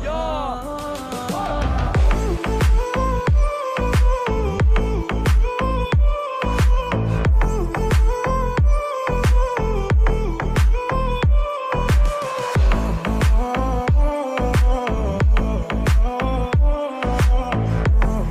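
No faults detected anywhere in this audio.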